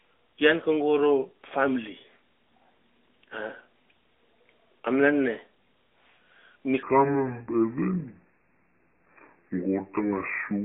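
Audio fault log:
6.83–10.65 s, section at the wrong speed: playback likely falls onto the wrong clock from 6.83 s, running the rest of the clip at 0.715 times its recorded speed, so the voice drops about five semitones and turns deep, slow and drawn out until the end.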